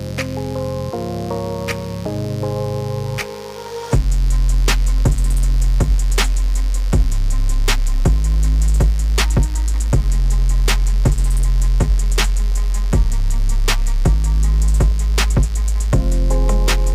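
Mains buzz runs throughout, a steady rasp roughly 25 dB down: switching spikes twice per 50 Hz cycle, showing stacked harmonic lines up to kilohertz.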